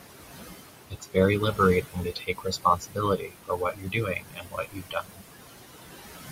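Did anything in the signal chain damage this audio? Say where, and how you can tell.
Yes. Throughout the clip the background pumps: the room noise, which sits about 9 dB under the speech, drops away by about 19 dB in the gaps and comes back up whenever speech starts. These are noise suppressor artifacts from the call-processing stage. The suppressor estimates the steady noise and applies a per-band, frame-by-frame gain, so the noise floor rises and falls with the speech instead of staying constant.

The same suppressor also damages the speech itself. Parts of it turn faint or swallowed at 0.9–1.17 s (dipping about 20 dB), 1.4–1.6 s (about 13 dB), 1.81–3.0 s (about 20 dB) and 3.17–5.25 s (about 21 dB). In the last span, roughly one and a half seconds of speech is affected. This is speech cut by the noise suppressor: quieter speech energy looked enough like the noise estimate that those bands were turned down along with the background.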